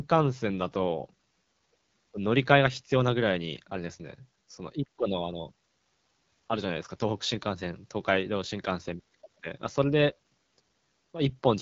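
From start to finish the speech passes through an AMR wideband (HD Voice) codec, and the damage is plainly audible. The voice has the rough, raspy grain of AMR-WB's second-lowest mode, which fits a rate of about 8.85 kbit/s. At that rate the pulse excitation feeding the vocal tract model is too coarse to reproduce the voice cleanly. Nothing remains above 7.6 kHz, and the top band sounds like noise rather than detail.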